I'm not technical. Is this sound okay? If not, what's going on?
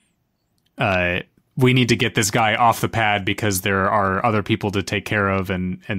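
No, there are two quick clicks in this speech, at 0.92 s and 2.39 s (between "need to get this" and "off the pad"). They're most likely dropped samples: a sliver of audio, well under a millisecond, went missing, so the waveform jumps and snaps.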